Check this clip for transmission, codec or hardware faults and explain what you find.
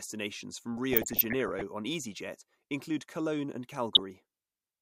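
Two bursts of DAB burbling affect the speech. The first runs from 0.77 to 1.62 s. The second is brief, from 3.95 to 3.99 s. Weak reception lets bit errors, roughly 0.4 to 0.5 percent, slip past error correction. Corrupted MP2 samples put short blips of noise in single sub-bands, and corrupted scale factors make sub-bands jump in level for up to a frame. The result is burbling over the speech.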